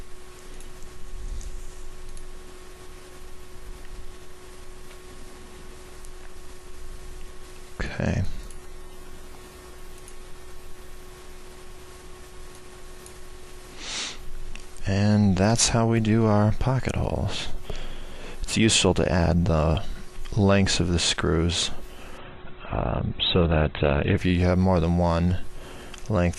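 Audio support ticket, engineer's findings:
Adaptive stream at a lower bitrate, 22.18–24.18 s. Treble gone above 4.2 kHz, artefacts rise, abrupt switch, no gap. Stream dropped to a low-bitrate rendition, sounds near 12 kbit/s Opus, then recovered.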